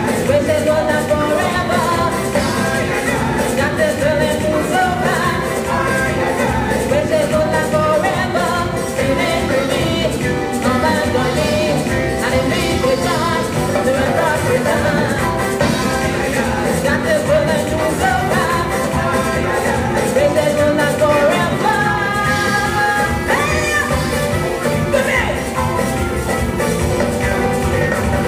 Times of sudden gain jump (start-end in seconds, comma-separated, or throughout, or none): none